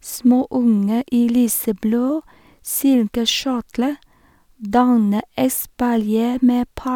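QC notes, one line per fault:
No technical faults were heard in this speech recording.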